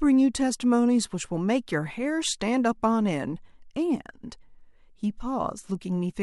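No technical faults are audible.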